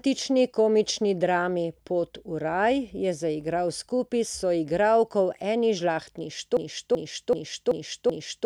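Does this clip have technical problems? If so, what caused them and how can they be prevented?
Yes. From 6.57 s to the end, the speech becomes a broken-record loop: one 0.38 s fragment repeats back to back five times, and the speech that should follow is lost. The likely cause is a player or stream stalling and resending its last held fragment. Preventing it needs a stall watchdog that outputs silence or reconnects, rather than replaying stale buffer contents.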